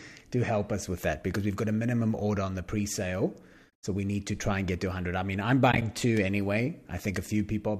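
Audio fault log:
3.70 s, AAC frame loss with muting: about 30 ms of sound simply drops to silence, consistent with three 10 ms frames of the light-textured low-delay AAC, likely AAC-ELD, that carries the clip. The overlapping windows fade the edges, so there's a soft gap.
5.72–5.82 s, AAC frame loss with muting: about 50 ms goes missing in scattered bits across 100 ms, the longest hole around 20 ms, giving a brief fluttery dropout with faded edges.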